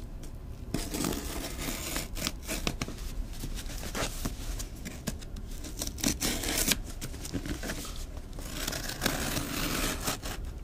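Nothing here sounds technically off; the audio just runs along without any faults to point out.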